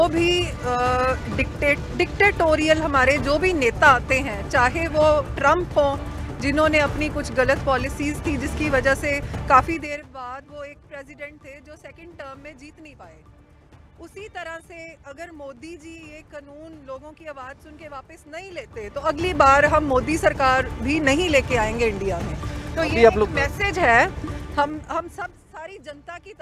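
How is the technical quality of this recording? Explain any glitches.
Level changes in the recording are not smooth. Three produce zipper noise. At 9.64–10.07 s, 18.52–19.37 s and 24.32–25.43 s, the gain moves about 20 dB (down, up, then down) in 3 dB steps at roughly 15, 7 and 7 steps per second. Each unsmoothed step clicks, so the fades tick audibly.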